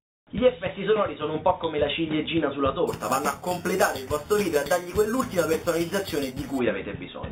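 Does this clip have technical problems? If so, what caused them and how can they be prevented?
Yes. From 2.87 to 6.59 s there is imaging from sample-and-hold upsampling. Each sample was repeated with no smoothing filter, which fits a rise from 8 kHz to 48 kHz. Mirror images appear from 4 to 8 kHz, about 15 dB below the signal. They are heard as a metallic fizz that tracks the sound. To prevent it, resample with a proper interpolating low-pass filter instead of repeating samples.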